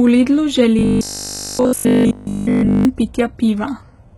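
A speech clip with heavy HE-AAC compression throughout. The treble above the codec's crossover sounds rebuilt rather than recorded, with gritty, lispy s sounds. This is likely spectral band replication at a very low bitrate, around 16 kbps, unlike plain low-pass filtering, which would simply dull the top. From 0.79 to 2.85 s the sound becomes robotic, with a rigid 50 Hz buzz, likely from repeated short buffers of about 20 ms replacing essentially all of the real audio. Unlike a codec warble, the buzz holds one fixed pitch.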